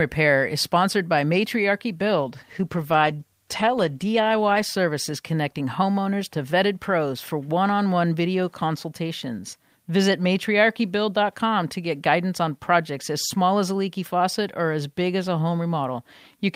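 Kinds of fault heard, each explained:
Call bitrate drop: From about 2.06 s to 5.93 s, just before "to vetted pros for", the speech turns coarse and watery as the call's encoder is starved of bits. The texture fits a fall from roughly 48 kbps to about 17 kbps, held at its worst for about 2 s. On a spectrogram the upper band thins and cuts off flat, with smeared, blotchy detail below. The waveform envelope looks much the same throughout.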